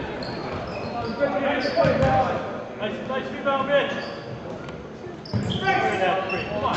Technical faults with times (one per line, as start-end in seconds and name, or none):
none